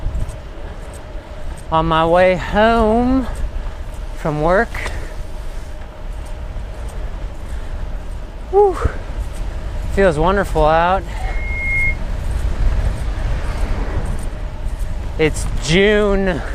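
Loudspeaker feedback squeal from 11.23 to 11.99 s: a 2.2 kHz tone swells over about half a second to roughly 5 dB above the audio, from a microphone-loudspeaker loop exceeding unity gain.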